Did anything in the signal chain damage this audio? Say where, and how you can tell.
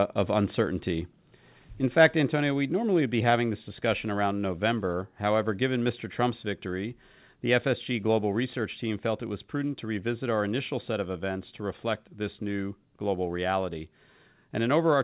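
Yes. The microphone volume was stepped down at 2.28 s and again at 14.94 s: the speech and background drop together, by about 3 dB and then about 2 dB. This is likely the call processing lowering the input gain, heard through a call path with nothing above 4 kHz.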